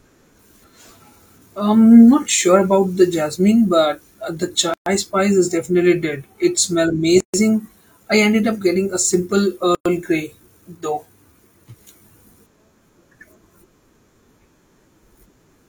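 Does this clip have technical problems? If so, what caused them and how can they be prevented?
Yes. In this speech, gaps at a join of encoded pieces open at 4.74, 7.20 and 9.75 s, lasting about 125, 133 and 106 ms. Each segment was encoded separately, so the encoder's start-up delay and final-frame padding remain as silence, with smeared edges. Trim encoder delay and padding using gapless metadata, or encode the whole programme in one pass.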